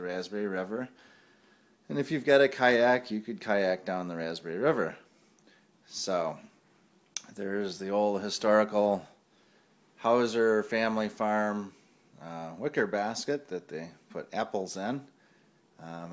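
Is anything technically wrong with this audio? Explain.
No, the signal shows no technical faults.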